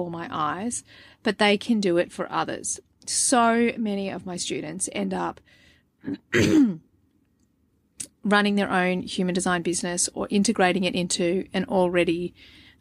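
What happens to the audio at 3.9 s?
Nothing goes wrong at 3.9 s: the speech runs on cleanly through that moment with no dropout, click or other break.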